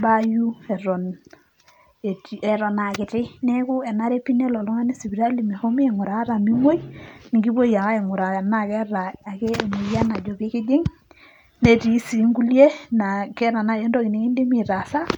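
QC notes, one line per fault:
2.48–4.61 s and 9.23–10.51 s, drift correction step: the speech abruptly runs 5.74% fast and sits about 97 cents sharp, nearly a semitone, then snaps back to normal, the first time just before "oltungani sipitali". This is likely a clock-matching rate jump to rebalance a buffer.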